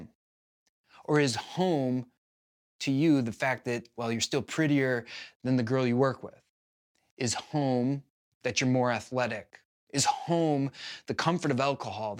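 A speech clip in which, from 1.34 s (just after "or is") to 5.05 s (ending before "than the girl you"), a fine hiss and grittiness rides on the voice, thickening on louder and brighter syllables and dropping away in the pauses. That pattern marks sample clock jitter: the converter's clock wanders by roughly 3 microseconds, so each sample lands slightly off time. Steep, fast-changing parts of the waveform take the largest errors, leaving a noise floor only about 35 dB under the speech.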